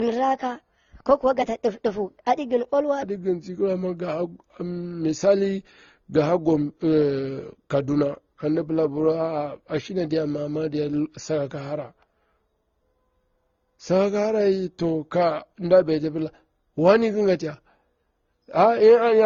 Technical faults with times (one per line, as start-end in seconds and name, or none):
0.00-19.26 transcoding between lossy codecs
0.00-3.03 section at the wrong speed